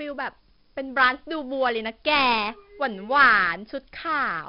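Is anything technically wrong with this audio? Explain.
Yes. 4-bit ADPCM compression runs through the whole clip. Each sample is coded as a small 4-bit step away from a predicted value, with the step size adapting continuously, so the coding error rides along as broadband noise that rises and falls with the speech. The damage is heavy: loud syllables carry a gritty hiss, and sharp onsets distort where the step lags behind the waveform. Nothing survives above 5.4 kHz, pointing to a low sample rate and a stream around 44 kbps, which leaves the speech dull.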